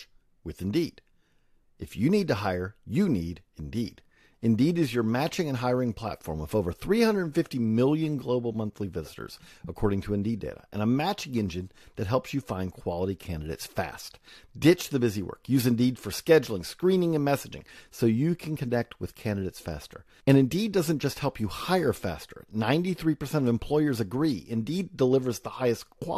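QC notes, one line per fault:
No technical faults heard anywhere in the speech.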